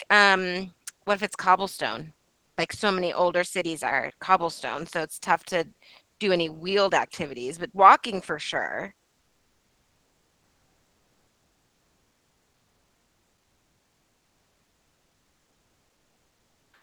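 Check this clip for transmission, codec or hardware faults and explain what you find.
One fault appears, heard through a call codec whose audio stops near 12 kHz. From 9.19 s to the end, after "but walking for sure", comfort noise replaces the background. The sender likely stopped transmitting once speech ended, and the receiver filled the gap. The real background becomes a steady, featureless hiss, about 4 dB quieter.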